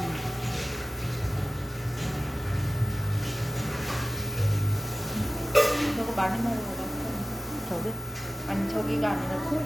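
Nothing goes wrong anywhere in this recording of sounds: no glitch, dropout or other technical fault turns up at any point.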